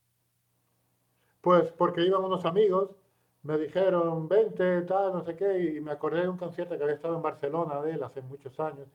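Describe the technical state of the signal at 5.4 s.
The signal at 5.4 s is intact, with no fault present at that moment.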